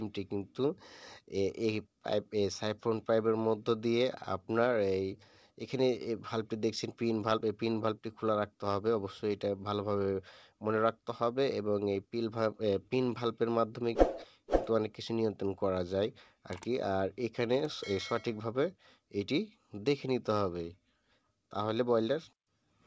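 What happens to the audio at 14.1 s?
At 14.1 s the audio is intact, carried through the WebRTC call path, with nothing above 8 kHz as that band-limited coding leaves it, and with no dropout, click or other disturbance at that point.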